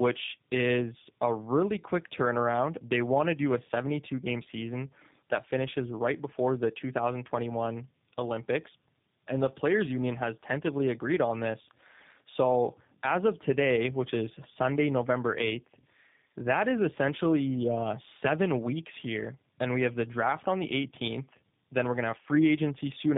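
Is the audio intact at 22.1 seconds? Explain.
No. At 22.1 seconds the speech carries tandem speech coding, which runs through the whole clip rather than starting there. The sound points to a chain of AMR-NB at 12.2 kbit/s, then G.711 A-law, then G.729A at 8 kbit/s: two low-rate speech coders in a row, the second re-encoding the first one's errors. The result is rough, muffled and warbly speech, with nothing above 3.8 kHz.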